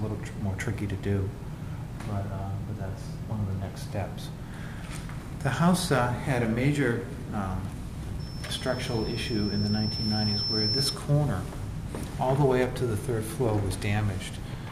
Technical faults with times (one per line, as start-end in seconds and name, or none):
8.19-11.03 loudspeaker feedback squeal